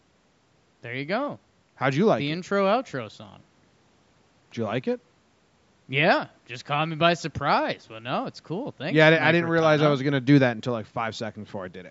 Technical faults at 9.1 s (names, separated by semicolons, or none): none